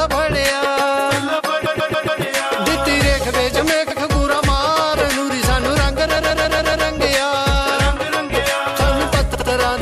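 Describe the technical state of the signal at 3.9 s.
Repeated frames at 3.90–4.00 s: that 93 ms run of compressed frames gets decoded a second time, so you hear a brief stutter.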